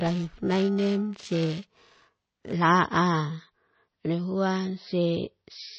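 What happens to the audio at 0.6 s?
At 0.6 s the speech has a rough, metallic edge, a grainy buzz that clings to every sound and would disappear in any pause. This is periodic clock jitter, running from the start of the clip to 2.53 s. The converter's sampling clock is being wobbled at a steady rate of about 1 kHz, so each frequency in the speech picks up sidebands spaced about 1 kHz above and below it, and the brighter, higher components are roughened the most.

Running beneath that, and through the whole clip, the speech sounds dull and heavily watery, with a swirling, unstable texture on sibilants and smeared onsets. Nothing is present above 5.9 kHz. The likely cause is heavy MP3 compression at a very low bitrate, consistent with around 24 kbps. Starved of bits, the encoder cuts the treble at a fixed point and drops weaker frequency lines, which flicker in and out between frames and produce that swirl.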